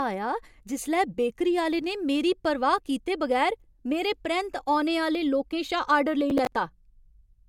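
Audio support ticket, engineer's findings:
Processor overload crackle, 6.3–6.53 s: gritty tearing on speech. Several ~10 ms buffers missed, old audio replayed. Waveform shows hard-edged repeats; spectrogram shows broadband vertical streaks.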